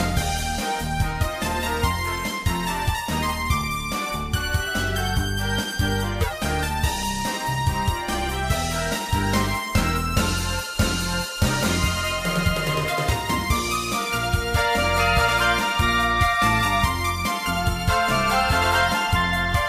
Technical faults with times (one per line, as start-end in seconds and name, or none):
6.21-6.32 corrupt frame decoded